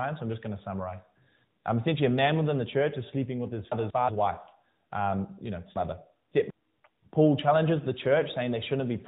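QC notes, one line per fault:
3.72–4.09 s and 5.76–6.50 s, chunks out of order: in both spots a block of about 186 ms plays after audio that should follow it, one chunk late in the first and three chunks late in the second. Nothing is missing, but the sound jumps back and forth in time, and each swap leaves hard joins. The longer second displacement makes a jumbled stretch, heard through the narrowband mobile-codec band limit.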